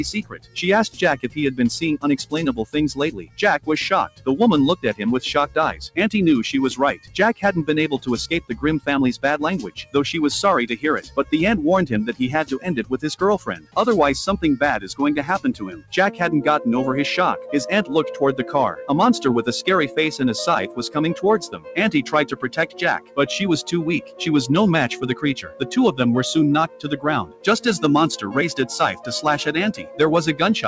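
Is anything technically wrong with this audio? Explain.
Yes. A noise suppressor applied to music or sounds runs through the whole clip. It was designed for speech, so it treats steady tones, ambience and reverb as noise and pulls them down. Level swings by around 10 dB, and held sound pumps and thins while attacks get through.

Sound cut by the noise suppressor occurs at 0.19–5.97 s, 6.94–11.32 s, 12.59–13.76 s, 14.79–15.93 s, 19.88–24.21 s, 25.15–25.66 s, and from 26.68 s to the end. Here the suppressor judges sustained or decaying sound as noise and ducks it by up to about 17 dB. Tails are clipped short and held sound sinks. The call path's 8 kHz ceiling, which is expected for G.722, is present throughout.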